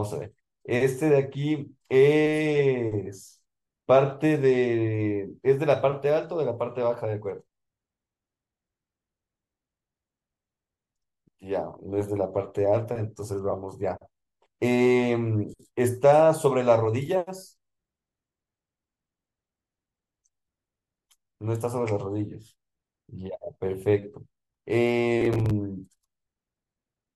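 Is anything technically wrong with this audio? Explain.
Yes. From 25.21 to 25.51 s there is processor overload crackle. The processor misses about ten buffer deadlines over this stretch, with buffers of around 10 ms, and each gap is filled with repeated old audio. This is heard as a gritty tearing burst. On the waveform it shows as hard-edged jumps, and on the spectrogram as repeated vertical broadband streaks.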